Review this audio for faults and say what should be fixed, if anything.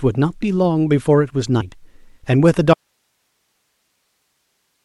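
At 1.60 s the speech jumps forward, losing roughly 40 ms. A second, similar jump of about 70 ms occurs at 4.10 s, where it is heard only within the background hiss. These are compressed frames skipped. Whole coded frames, each about 21.3 ms long, were never decoded, either missing from the file or rejected as corrupt. The skips fit two and three frames. Prevention: verify file integrity after encoding and transfer, and re-encode from the source rather than patching a damaged stream.

From 2.74 s to the end, the speech cuts out abruptly, mid-flow, and does not return. All that remains is steady hiss about 55 dB below the speech level. This is an audio dropout to a faint residue. The chain after the break stayed live and kept passing its own noise, but the wanted signal stopped arriving, likely through a lost connection or a failed feed at the source side. Prevention: secure and monitor the input connection during recording, with a level meter or alert that flags sudden loss of signal.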